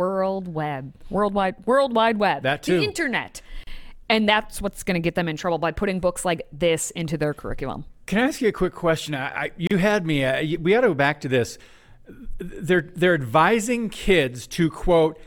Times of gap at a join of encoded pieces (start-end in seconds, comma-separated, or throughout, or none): 3.63-3.67, 9.67-9.71